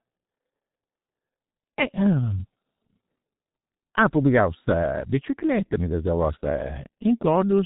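Muffled, hoarse speech with smeared consonants runs the whole clip, with nothing above about 3.8 kHz. The damage is heavy and fits G.723.1 codec coding near 6.3 kbit/s, whose 30 ms frames and slowly updated voice model blur quick sound changes.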